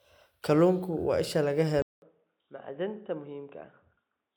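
Input switched to a poorer device at 1.82 s, right after "waa isha laga", lasting to the end. After a 200 ms gap, the speech likely comes from a narrower-band microphone: nothing above 3.8 kHz, dull and boxy, roughly 10 dB quieter, with a faint new noise floor.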